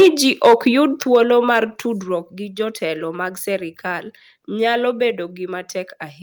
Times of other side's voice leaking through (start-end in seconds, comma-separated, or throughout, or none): none